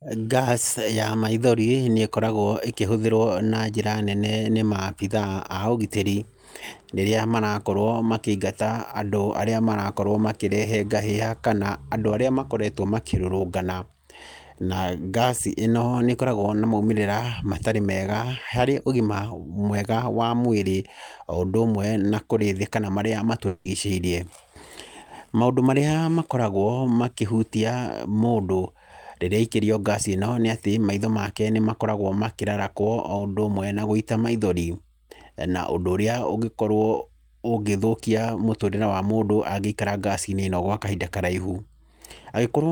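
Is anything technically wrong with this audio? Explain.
Yes, there are two network faults. From 23.47 to 23.67 s, a long network dropout likely interrupted the incoming audio. The receiver stretched the last sound across 180 ms, producing a fading buzz or hiss.

From 33.17 to 33.21 s, short concealed packet loss lost 20 ms of audio before decoding. The receiver continued the preceding sound and blended back, leaving a brief smear.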